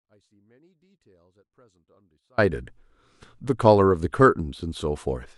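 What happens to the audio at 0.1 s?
At 0.1 s the speech is already missing, with only faint sound left, roughly 40 dB down, until it returns abruptly at 2.38 s. This audio dropout to a faint residue is likely a signal loss upstream while the path afterward stayed live.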